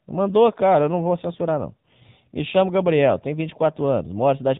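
Throughout the speech, the AMR narrowband mobile codec is plainly audible. Nothing passes above 4 kHz, and the voice has a buzzy, synthetic edge from the pulse-driven vocal-tract model. That edge, rather than simple dullness, separates it from a plain low-pass filter and points to a low AMR-NB mode around 7.4 kbps.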